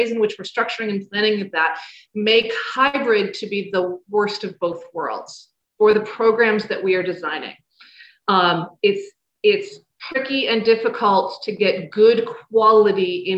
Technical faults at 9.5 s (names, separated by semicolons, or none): none